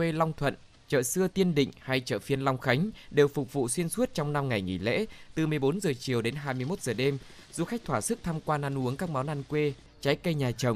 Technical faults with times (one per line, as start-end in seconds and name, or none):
0.00-10.75 clock drift between sender and receiver
0.29-10.57 repeated timing corrections